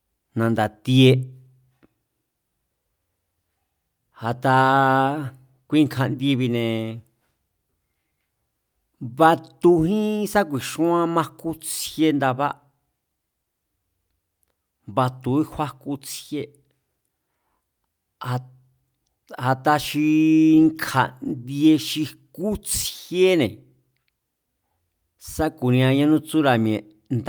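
No technical faults can be heard anywhere in the recording, with the signal holding steady and intact throughout.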